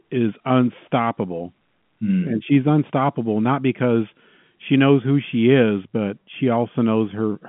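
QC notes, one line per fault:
No faults to note in this speech clip.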